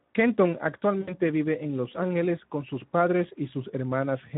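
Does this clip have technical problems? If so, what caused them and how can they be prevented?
Yes. Speex codec damage runs throughout: starved CELP excitation makes the speech hoarse and noisy, consistent with roughly 11 kbps. Prevent it by using a higher Speex quality setting or a modern codec such as Opus.

VoIP packet loss concealed by the speech codec occurs from 1.01 to 1.14 s, just before "vive en". About 60 ms of audio, fitting three 20 ms frames, is replaced by a fading extrapolation of the last pitch and filter. Prevent it with forward error correction, a larger jitter buffer, or a more reliable network path.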